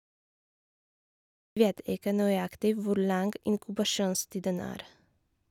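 Dead digital silence fills the opening of this speech recording until about 1.57 s, where the audio jumps straight in partway through a sound, with no natural onset or gradual rise in level. That abrupt entry is a cut-off start: capture or streaming began late, so the first moment of the sound was never recorded. The silence before the jump is padding rather than quiet room tone.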